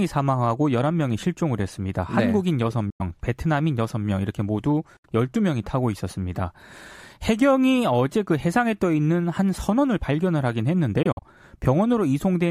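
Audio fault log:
2.90–3.01 s, 4.97–5.06 s and 11.03–11.24 s, Bluetooth dropout: silences of 93 ms and 70 ms, then a broken patch of short gaps up to 46 ms; sound resumes further along, as if it kept playing. Likely late packets dropped before the headphones.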